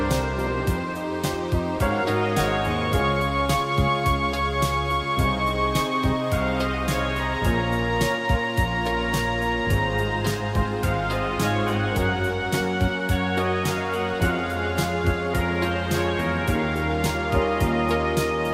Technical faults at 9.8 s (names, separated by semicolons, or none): mains hum